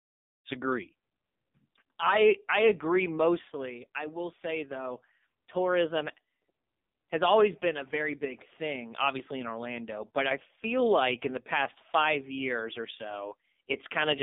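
Throughout, the speech is squeezed through the AMR narrowband mobile codec at a bitrate that points to about 6 kbps. Only 200 Hz to 3.7 kHz survives, and the heavily damaged voice comes out buzzy and synthetic, from the smooth fade-in over the first half second onward.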